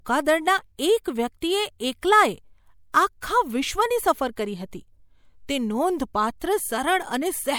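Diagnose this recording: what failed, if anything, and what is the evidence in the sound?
Codec stage: pre-echo from 2.01 to 2.03 s, 21 ms of hiss before an attack as block-wide quantisation noise leaks backward. A spectrogram shows broadband haze preceding the onset.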